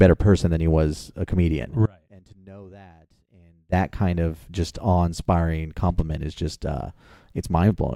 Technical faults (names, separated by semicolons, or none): audio dropout to a faint residue